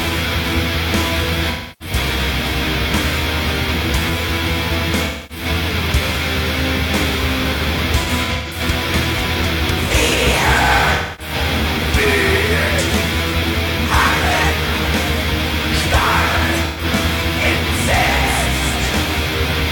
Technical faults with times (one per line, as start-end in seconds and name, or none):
0.00-19.72 low bit depth with noise shaping
1.50-1.95 AAC frame loss with concealment
5.04-5.45 AAC frame loss with concealment
8.03-8.61 AAC frame loss with concealment
10.93-11.34 AAC frame loss with concealment
16.65-16.84 AAC frame loss with concealment